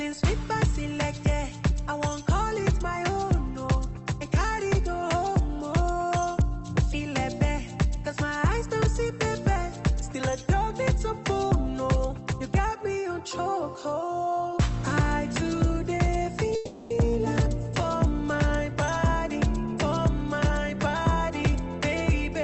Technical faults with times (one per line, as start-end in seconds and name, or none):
16.55-16.92 call audio freeze